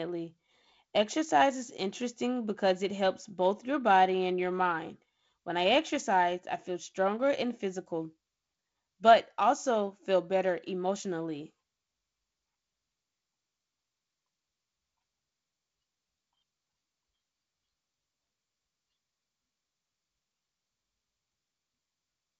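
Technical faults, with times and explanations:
No technical faults: the speech carries the narrowed top end of G.722 wideband telephone coding, with nothing above about 7.7 kHz and the light upper-band hiss and slightly noisier low band that fit its 48 kbit/s mode.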